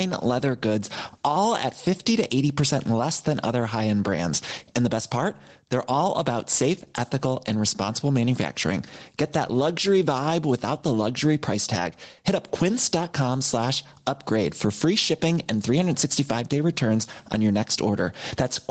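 From start to finish, the speech has gain pumping. The level swings by about 15 dB. It drops on each loud sound and climbs back after it. Loud and soft parts sit closer in level than they should, and the sound is squashed. The likely cause is an input gain set too high, with a fast limiter or compressor pulling it down on each peak. Nothing is heard above 8 kHz, which fits the bandwidth of an Opus call.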